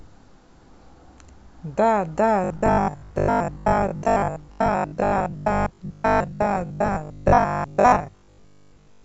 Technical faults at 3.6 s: robotic sound from repeated short buffers

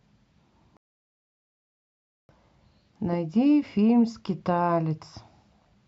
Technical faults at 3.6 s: none

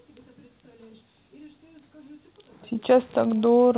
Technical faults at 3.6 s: none

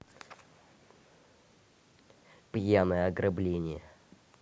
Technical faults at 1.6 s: none

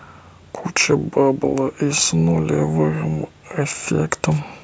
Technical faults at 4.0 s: none

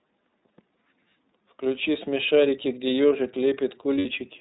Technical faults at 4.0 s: iLBC codec; lost iLBC frames

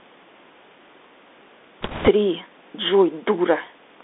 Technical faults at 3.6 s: Bluetooth CVSD headset codec

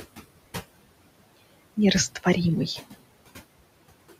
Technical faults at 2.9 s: noise suppressor artifacts

